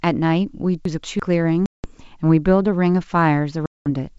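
From 0.85 to 1.20 s, chunks play out of order: one block of about 171 ms was written one chunk late, so the speech jumbles briefly at the hard joins. From 1.66 to 1.91 s and again from 3.66 to 3.87 s, packet loss on an ADPCM call drops around ten packets each time, leaving holes of about 180 ms and 200 ms. The decoder's predictor is then out of step with the sender's, so the speech resumes with brief distortion.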